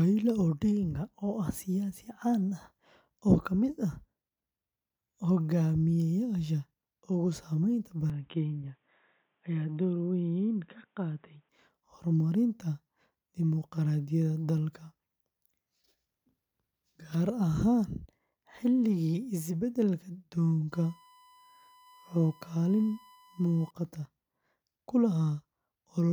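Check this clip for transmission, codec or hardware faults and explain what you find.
Two hardware faults are present in this speech clip.

From 8.10 to 11.49 s, the input most likely switched to a poorer device, such as another microphone or a headset running its call profile. The new device passes a narrower band, with nothing above 3.8 kHz, so the speech turns dull and boxy with no gap at the changeover. It also drops by roughly 5 dB and brings its own faint background noise, sitting well below the speech. The full, brighter sound returns at 11.49 s.

From 20.72 to 23.71 s there is USB whine. The USB bus draws current in regular 1 ms frames, and that pulsing leaks into the audio path through shared power or ground. The result is a steady, fixed-pitch tone at 1 kHz, its strongest component, running at around 30 dB below the speech. It is a quiet, thin whistle behind the speech.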